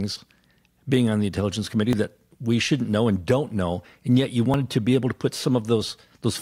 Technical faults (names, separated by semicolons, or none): dropped buffer (overrun)